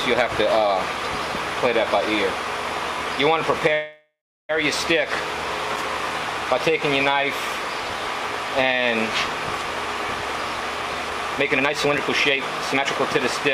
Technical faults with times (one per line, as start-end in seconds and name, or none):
3.73-4.51 call audio freeze
5.76 block of digital silence
11.10-13.03 jitter buffer speed-up
11.98 block of digital silence